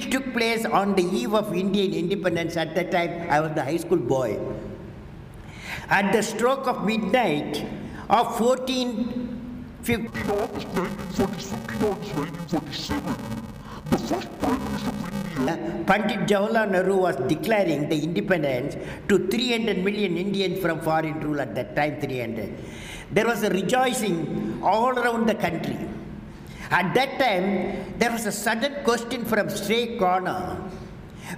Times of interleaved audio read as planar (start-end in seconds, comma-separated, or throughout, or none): 10.07-15.47